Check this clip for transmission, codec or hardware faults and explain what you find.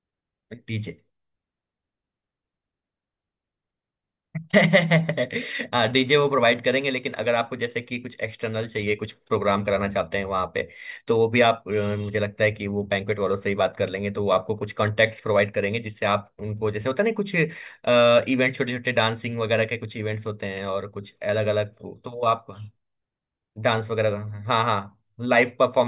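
Nothing turned up here: no transmission, codec or hardware faults to report anywhere in the clip.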